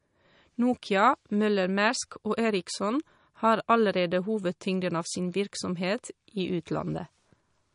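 From start to finish the speech carries plainly audible MP3 compression damage. Nothing comes through above 10.6 kHz, so the top end is sliced off flat, which is what an encoder does when it's short on bits. The sound is thin and watery, with quieter detail flickering in and out as the encoder drops weak frequency components frame by frame. That level of damage fits a low bitrate, likely around 40 kbps.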